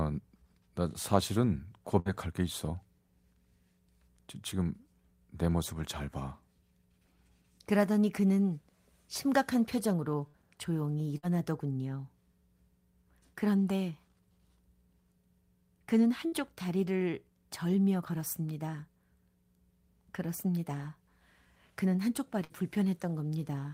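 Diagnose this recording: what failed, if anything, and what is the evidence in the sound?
The network dropped runs of packets, a burst of packet loss at 1.99, 10.27, 11.17, 16.27 and 22.44 s. Each time the receiver stretched the last sound for about 55 ms, fading it to a held buzz or hiss, then resumed with 60 ms of speech missing.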